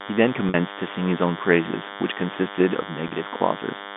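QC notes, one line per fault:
Throughout, DECT cordless phone buzz: a steady, thin buzz sits under the speech, clearly audible and not far below it. It has a 100 Hz fundamental and a dense stack of harmonics, the sign of a nearby DECT handset or base whose 10 ms radio bursts are being rectified in the audio circuitry.
0.49 to 0.54 s and 3.08 to 3.11 s, packet loss with pitch repetition: each time the speech briefly turns into a held, buzzy tone. About 50 ms and then 30 ms of audio went missing, which fits five and three 10 ms packets. The receiver bridged each gap by looping the last pitch period.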